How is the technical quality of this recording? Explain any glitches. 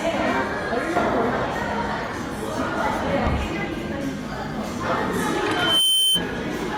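The recording has one clear glitch near the end. Loudspeaker feedback squeal runs from 5.51 to 6.23 s: a microphone re-captured its own loudspeaker, and the loop gain rose above one at 3.1 kHz. That tone swells within about a third of a second into a piercing whistle, a few decibels louder than the sounds around it.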